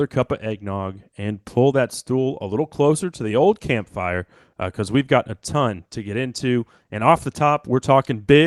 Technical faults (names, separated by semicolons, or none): clock drift between sender and receiver; repeated timing corrections